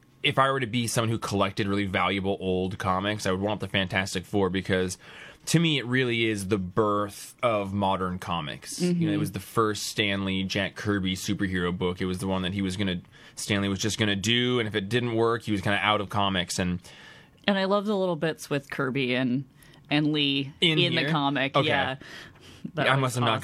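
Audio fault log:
No audible faults anywhere in this speech recording.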